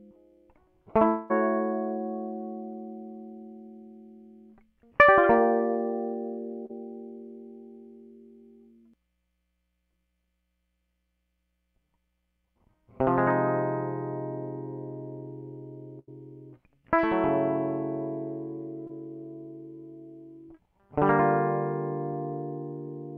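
At 1.07 s the music breaks for about a quarter of a second, until 1.32 s. The last sound carries on as a synthetic tail and fades, but it never drops to silence. When the music returns, roughly 220 ms of it is gone. This is most likely a long network dropout. The receiver got nothing for that stretch. It kept extending what it last had, then rejoined the stream further on.

From 6.66 to 6.71 s there is a short concealed packet loss. About 40 ms of audio never reached the decoder in time. The receiver filled the hole by continuing the preceding sound, then blended back into the real signal. It is heard as a brief smear in the music.

From 15.99 to 16.09 s comes a burst of packet loss. Around 80 ms in a row went missing. The receiver stretched the last sound across the gap and turned it down as the gap went on. The result is a held, fading tone or hiss. The music then resumes further on. 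The section in between is simply absent.

A second short concealed packet loss sits at 18.87 to 18.91 s. This one covers only about 20 ms. The decoder again patched it by extending the prior sound and crossfading back. It is shorter than the first. It registers as a brief smear or wobble in the music.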